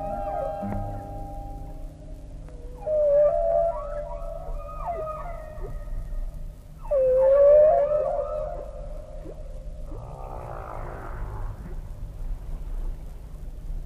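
Twice the Bluetooth link seems to have come under strain, and the sender cut back the SBC bit pool to keep audio flowing: a Bluetooth SBC bit pool drop from 1.92 to 4.20 s and again from 7.40 to 10.20 s. The thinner bit budget starves the upper sub-bands and coarsens the rest, so the treble goes dull and a gritty noise rises. The degradation fits a fall from a bit pool of 31 to 14, about 99 kbps.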